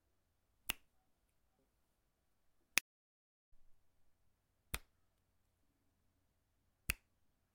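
Sounds cut abruptly to dead silence from 2.79 to 3.52 s, losing about 0.73 s: an audio dropout to silence, likely a lost input written as silence.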